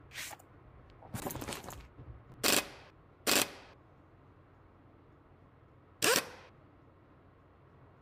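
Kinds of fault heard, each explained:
Chunks out of order: Short 20 ms blocks of sound play late, after blocks that should follow them. Brief jumbled moments occur near 1.14, 2.3 and 3.38 s.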